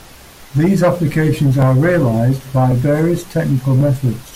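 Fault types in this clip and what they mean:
Clock drift buffer slips, 0.53 to 3.81 s: a click recurs in the speech every 1.09 s, about four in all. The likely cause is two devices on separate clocks roughly 1000 ppm apart, so a buffer periodically drops or repeats around 50 samples.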